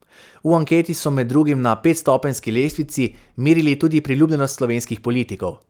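A short speech recording with no audible technical faults anywhere in the signal.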